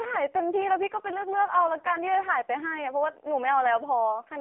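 AMR narrowband mobile codec damage runs through the whole clip. The speech is squeezed into a telephone band of about 300 Hz to 3.5 kHz, with nothing above 3.7 kHz, and heavy buzzy, synthetic colouring that fits one of the codec's lowest modes, near 5 kbps.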